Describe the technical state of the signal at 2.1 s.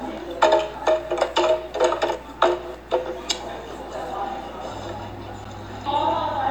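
The audio at 2.1 s is intact, with no dropout, clipping, glitch or other fault at that moment.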